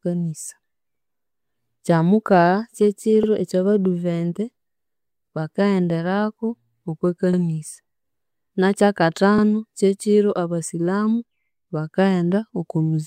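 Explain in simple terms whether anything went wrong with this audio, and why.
Something did go wrong. The speech has a fault called overlapping chunks. The audio was handled in pieces about 2 seconds long. Each new piece started a little before the previous one finished. So at every join, about 50 milliseconds of sound plays twice. You hear this as a small stutter or click at 3.23, 5.28, 7.33, 9.38 and 11.43 seconds. The regular 2-second spacing gives it away.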